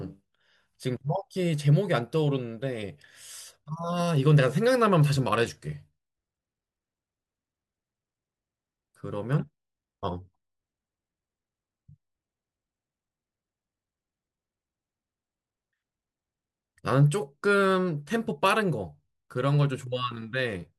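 Nothing in this recording stands out as a technical fault; the speech runs along without any glitch, gap or damage worth flagging.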